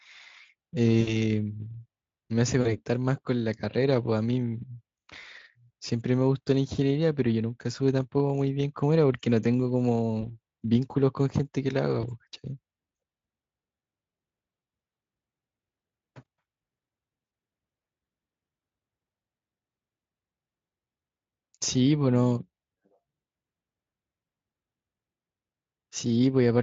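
VoIP packet loss concealed by the speech codec occurs at 1.01–1.16, 2.61–2.76, 5.19–5.24, 10.21–10.36, 12.01–12.06 and 17.25–17.31 s. Each time, the decoder fills missing packets by stretching its last pitch into a fading buzzy tone or coloured noise, and the speech stays weakened briefly afterwards.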